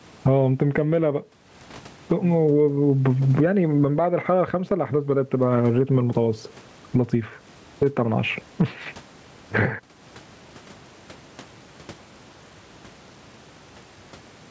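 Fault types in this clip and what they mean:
gain pumping: Throughout the speech, with the background noise sitting about 44 dB below the talker, the level swings by around 20 dB. Loud and quiet syllables sit unnaturally close in level, and the delivery sounds squashed. The likely cause is input gain set far too high for the microphone, with a fast limiter or compressor clamping it down on every loud passage.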